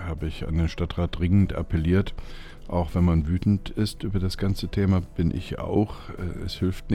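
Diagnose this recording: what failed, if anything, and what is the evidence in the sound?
Nothing stood out on listening that would point to a failure at any stage of the chain.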